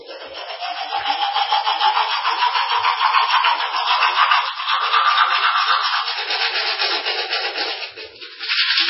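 Sounds, likely squeezed through heavy MP3 compression at a rate that fits about 16 kbps: nothing survives above 5.6 kHz, leaving a dull, watery, swirling texture throughout.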